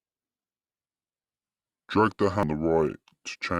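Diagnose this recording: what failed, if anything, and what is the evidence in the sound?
A likely clock mismatch at playback runs the speech from 0.81 s to the end at 0.73 times speed, dropping pitch about five semitones: section at the wrong speed.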